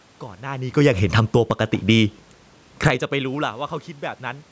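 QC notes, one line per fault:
0.64 to 1.56 s and 2.71 to 3.03 s, automatic gain falling: both times the gain control decided the input was too hot and pulled its gain down, by about 6 dB over roughly a second in the first case and by about 10 dB in a much quicker third of a second in the second. The speech and the room noise behind it sink together, which is how you can tell it's the gain stage and not the talker, though the talker does move around 0.5 s, just before the first dip.
2.94 to 3.48 s, automatic gain rising: right as the second cut finishes, the input level falls away by about 24 dB, likely because the talker backs off the mic around 3.0 s, so the control swings the other way and brings its gain back up by about 10 dB over half a second. You hear the voice and background swell up together, only partly making up the drop, with the bandwidth still topping out at 8 kHz from the call processing.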